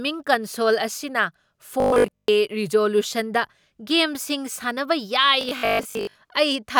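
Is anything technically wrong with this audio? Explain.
Yes. Robotic sound from repeated short buffers appears from 1.80 to 2.28 s and from 5.41 to 6.17 s: a rigid, metallic 50 Hz buzz, likely from a 20 ms buffer replaying while most of the audio is skipped.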